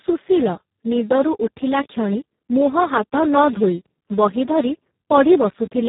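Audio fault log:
throughout Speex codec: a low-rate CELP encode, which fits roughly 4 kbps, starves the excitation, leaving speech hoarse and noisy, with nothing above 3.8 kHz.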